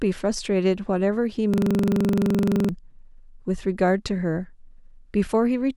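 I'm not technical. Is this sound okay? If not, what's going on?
No. From 1.54 to 2.69 s there is a system hang loop: the computer briefly froze, but the sound hardware kept replaying the last tiny slice of audio it had been handed. That slice is only about 43 ms long, so it repeats 27 times at roughly 23 times a second, turning the speech into a rapid, rattling stutter. About a second of the real speech never gets through, and the talking resumes afterwards with that gap missing.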